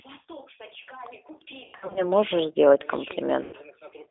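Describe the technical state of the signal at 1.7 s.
At 1.7 s you're inside a burst of VoIP packet loss concealed by the speech codec, running from 1.64 to 2.06 s. The decoder fills about 240 ms of gaps, the longest about 100 ms, by stretching its last pitch and filter into a buzzy tone or coloured noise that fades. Underneath, the G.729 codec at 8 kbit/s confines everything to a 300 Hz to 3.6 kHz line band and leaves a rough, synthetic edge.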